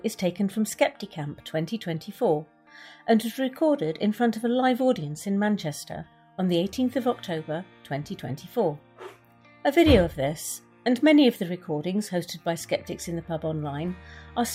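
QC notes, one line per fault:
No fault found in these QC notes.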